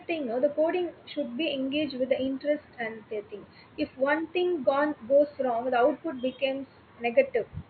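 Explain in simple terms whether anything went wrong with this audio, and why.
Nothing went wrong with the recording: the speech comes through intact, with only the ordinary background sound of the room sitting well below it.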